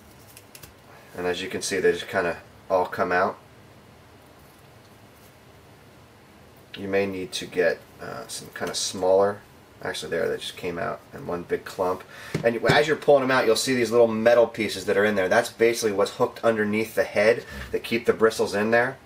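No technical fault can be heard anywhere in the audio; the signal stays steady and intact throughout.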